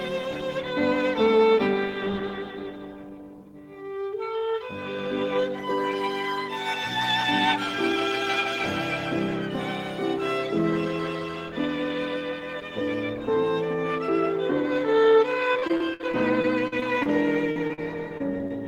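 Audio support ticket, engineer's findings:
Choppy, metallic, robotic sound with pieces missing, 15.53 to 17.07 s. Repeated packet loss: eleven dropouts, longest 59 ms, about 18% of the stretch patched. The decoder's concealment extends the last sound into each hole before the next hole arrives.

Brief smears or wobbles at 17.51 to 17.57, 17.67 to 17.71, 17.73 to 17.79, 18.17 to 18.22, 18.38 to 18.41 and 18.47 to 18.52 s. Short concealed packet loss, 20 to 40 ms each. The receiver continues the preceding sound across each hole, then blends back into the real audio.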